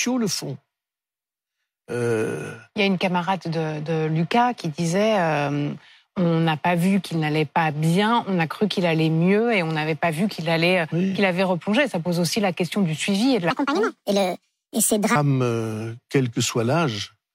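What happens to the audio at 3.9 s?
Nothing goes wrong at 3.9 s; the speech there plays through intact, with no dropout, glitch or other audible fault.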